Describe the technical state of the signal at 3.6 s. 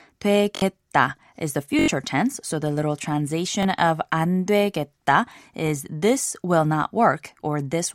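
At 3.63 to 3.65 s there is a repeated buffer, just before "of 안 되겠다 is". New audio did not reach the output in time, so the device played its last block of sound a second time. The repeat lasts about 21 ms, which fits a 1024-sample buffer. Each copy meets the next at a hard join. The speech gives a short stutter or click there. Around 20 ms of real audio is lost.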